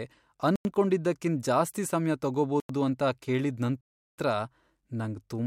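Blocks of digital silence hit at 0.56–0.65 s and 2.60–2.69 s (93 ms each, fitting a 4096-sample buffer), then 3.81–4.18 s (372 ms). Likely unfilled output buffers cut the speech abruptly to silence.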